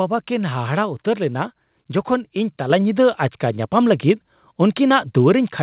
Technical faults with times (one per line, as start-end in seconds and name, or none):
2.70 microphone volume stepped up